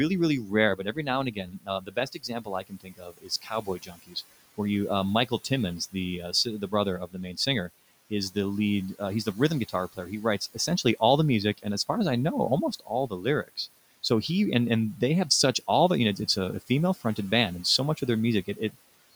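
Between 0.44 and 4.59 s, before "you uh", the noise suppressor cuts into the speech. It mistakes parts of the speech for the room noise, which sits about 21 dB below the speech. It pulls them down by up to about 19 dB, for about two seconds in total. Shorter cuts of about 12 to 17 dB follow at 5.29–8.36, 8.99–9.98, 12.79–14.04 (after "as I know almost"), 15.67–17.18 and 17.78–18.75 s (after "band and"). Those syllables sound swallowed and faint.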